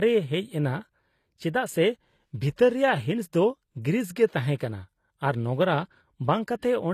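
Throughout the speech, the top of the spectrum has an artificial quality: nothing reaches above 14.9 kHz, and the treble below that limit sounds rebuilt rather than captured. This is plainly audible damage, likely from HE-AAC compression at a low rate, with the sound pointing to something near 24 kbps. Spectral band replication copies lower bands upward under a coarse envelope, so the high harmonics fail to line up with the real ones beneath them. A plain low-pass filter would instead leave the treble dull and missing. Here the treble is present but sounds synthetic.

From 4.57 to 4.60 s, an attack is preceded by pre-echo, a smear of noise about 37 ms long arriving just before the onset. The codec spread its quantisation noise across the whole transform block, so noise scaled for the loud attack also leaked into the quiet moment ahead of it. This sets it apart from ordinary echo or reverb, which trail after a sound: the hiss comes first, and the attack itself loses its crispness.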